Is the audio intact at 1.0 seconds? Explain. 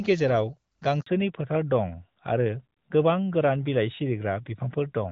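No. At 1.00 s the call is handed over from one network to another, and for 60 ms, until 1.06 s, no speech frames arrive. This handover gap makes the voice fade out within a few tens of milliseconds and leaves dead silence, losing whatever was said in that span.

When the link returns at 1.06 s, the call has fallen back from wideband HD Voice to an older narrowband codec, consistent with AMR-NB at around 12.2 kbit/s. This fallback to narrowband strips out everything above 4 kHz through the end of the clip, so the voice sounds duller and rougher than the crisper wideband sound before the gap.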